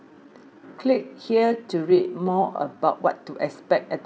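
Speech with a time-stretched section from 0.0 to 2.84 s, slowed to about 0.68x speed without a pitch drop, so the pace drags, likely from software fitting the audio to a length.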